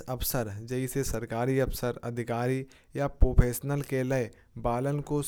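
No technical faults are audible.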